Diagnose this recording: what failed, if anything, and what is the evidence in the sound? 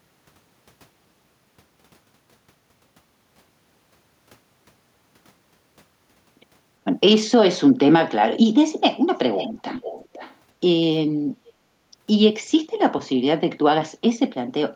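A delayed copy of the speech returns from 9.36 to 10.36 s, trailing the original by 468 ms and sitting roughly 15 dB below it. A much fainter scrap appears from 11.46 to 11.53 s at the same lag. The fault is an echo leak in call processing, likely from a far-end loudspeaker whose echo canceller passed residual microphone pickup back down the line.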